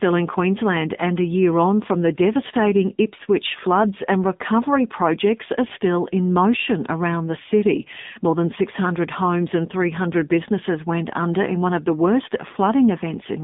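Throughout, speech runs through an AMR narrowband mobile codec at a low mode, consistent with 7.4 kbps, removing everything above 3.7 kHz and leaving it audibly buzzy and synthetic.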